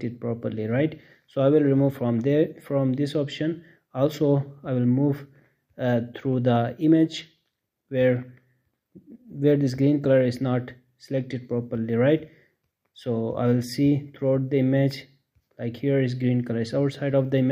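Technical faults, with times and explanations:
1.29–1.79 s, CD scratch ticks: Five short ticks land in about half a second, roughly eight per second. Each is very brief, the longest well under a millisecond. A scratch on the disc passes the laser once per revolution. Each pass wipes out more data than error correction can rebuild. The player then patches or mutes those few samples, leaving a tiny click in the sound. That regular spacing points to the disc's rotation.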